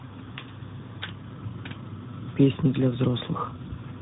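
Throughout, tandem speech coding: AMR-NB, then G.711 A-law, then CVSD each re-encoded the prior output, leaving rough, muffled, warbly speech with nothing above 3.8 kHz.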